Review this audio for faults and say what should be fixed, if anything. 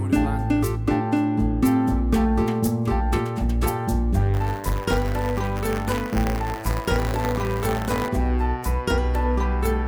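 From 4.33 s to 8.08 s a steady robotic buzz at 100 Hz rides on the sound. It is buffer tearing: the writer and the hardware reader have slipped and cross inside each 10 ms period, so a small slice of every buffer replays audio about 40 ms old, hard-joined at both edges. To prevent it, keep the write position a safe margin ahead of the read position, with proper synchronisation and recovery when they drift.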